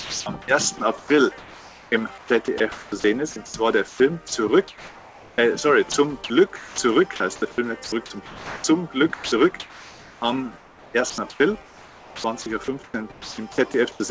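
Sound dropped by the voice detector appears at 0.00–0.26 s and 5.92–5.94 s, where steady comfort noise replaces the audio. The likely cause is the sender's detector taking it for background. Sound chopped by the voice detector runs through 0.78–5.38 s, 6.56–7.20 s and 7.84–14.00 s. The audio repeatedly switches to synthetic noise, for about 2.0 s, 0.26 s and 2.9 s in total. The band stops at 8 kHz, which fits a G.722-class call codec.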